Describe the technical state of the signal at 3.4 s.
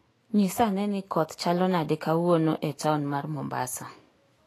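At 3.4 s the speech sounds hissy and grainy, with nothing above 14.2 kHz, as throughout the clip; the cause is likely low-bitrate Vorbis compression, around 33 kbps, coarsely quantising treble into noise.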